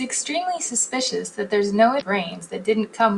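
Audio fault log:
1.98–2.02 s, damaged data in a compressed stream: a short glitch of about 40 ms breaks through the speech. Corrupted bytes in the encoded stream there made the decoder misread frames and lose sync until it found the next valid frame header.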